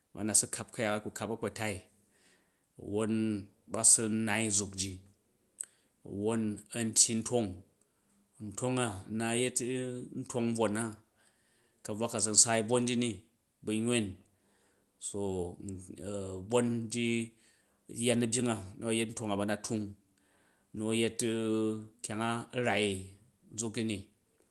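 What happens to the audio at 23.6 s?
At 23.6 s the speech passes through intact, with no dropout, glitch or other fault, only the ordinary character of the call path it travelled through.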